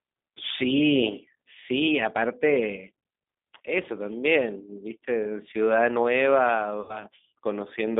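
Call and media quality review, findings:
G.729 codec, whole clip: speech band-limited to roughly 200 Hz to 3.6 kHz, nothing above 4 kHz, with plainly audible roughness and a slightly synthetic edge. The sound fits an 8 kbit/s G.729A leg rebuilding speech from a vocal tract filter plus sparse pulses.

VoIP packet loss concealed by the speech codec, 3.58 to 3.60 s: a brief smeared blip. It fits a single 20 ms packet lost, with the decoder guessing from its last pitch and filter.

Same fault, 6.81 to 7.04 s and longer: about 80 ms of lost audio stretched into a fading buzzy tone or coloured noise, then weak, distorted speech for a short while after packets resume as the decoder's state recovers.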